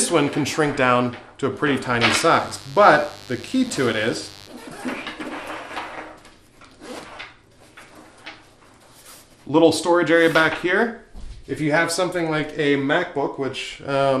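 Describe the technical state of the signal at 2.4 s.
A steady, raspy mains buzz sits under the sound from 2.28 s to 4.5 s, roughly 20 dB below the signal. Sharp switching spikes, most likely from a dimmer, rectifier or poor shielding, arrive twice per 50 Hz cycle, spreading harmonics up into several kHz.

The sound is also dull and grainy, with a gurgling texture, and upper bands drop in and out. This is likely MP2 compression at a low bitrate, around 80 kbps, leaving too few bits for the high sub-bands and quantising the rest coarsely.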